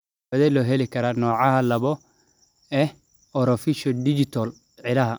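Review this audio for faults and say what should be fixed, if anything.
Nothing stood out on listening to this speech recording, so there is nothing here that needs fixing.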